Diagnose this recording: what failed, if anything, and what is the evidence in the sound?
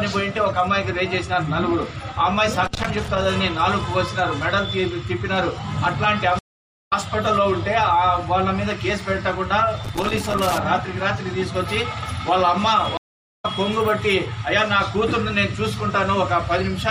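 Analogue wiring: loose connector crackle at 2.65–3.25 s and 9.85–10.58 s. An intermittent contact chops the signal, showing as irregular broadband vertical streaks and spiky waveform bursts.

Network: stream reconnect at 6.39 s (471 ms gap, resuming about half a second later) and 12.97 s (414 ms gap, roughly 0.3 s later). Both appear as flat-line dropouts, then a fresh decoder start.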